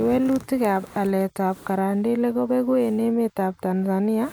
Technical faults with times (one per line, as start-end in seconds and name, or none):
none